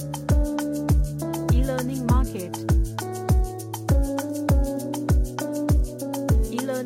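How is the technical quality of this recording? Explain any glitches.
No audible glitches or faults.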